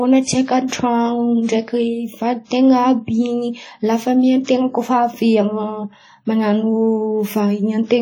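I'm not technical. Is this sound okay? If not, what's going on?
No, the whole speech clip sounds washy and ringing, with a hiss that swells and fades along with the voice; that's likely heavy WMA compression.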